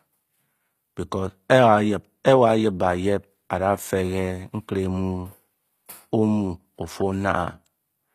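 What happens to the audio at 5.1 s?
The audio at 5.1 s, like the whole clip, is likely HE-AAC compression at a low bitrate, around 24 kbps. The treble above 14.9 kHz is gone, and the rebuilt upper bands are copied from below, so s sounds come out gritty and metallic.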